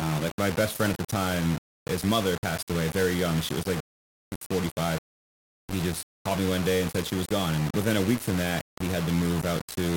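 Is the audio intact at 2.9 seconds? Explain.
No. Low bit depth without dither runs through the whole clip, including 2.9 s. The speech was likely quantised to very few levels, consistent with roughly 4 bits, and rounded with no dither, so the error tracks the waveform rather than forming steady hiss. The grainy, buzzy distortion sits only about 10 dB below the speech and shifts with it, roughening quiet stretches and leaving the softest moments sputtering between steps or dropping to silence.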